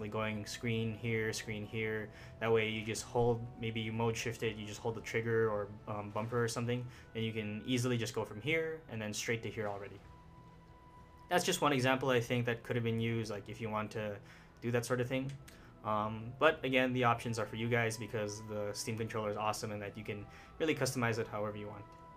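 No dropouts, distortion, glitches or other technical faults are audible anywhere in the recording.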